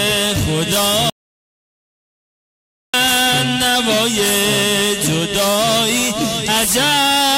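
At 1.10 s the sound drops out to dead silence for about 1.84 s, until 2.94 s, an audio dropout to silence, likely a lost input feed.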